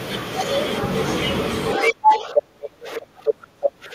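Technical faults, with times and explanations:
1.73–1.93 s, 2.35–2.41 s, 2.95–3.00 s, 3.26–3.34 s: other side's voice leaking through, short scraps, mostly a little louder than the talker, one much quieter, likely incomplete echo cancellation.
1.76–3.95 s: speech suppressed in double talk; the talker's level dips in pieces for about two seconds, at worst around 25 dB down, likely from the canceller attenuating both voices together.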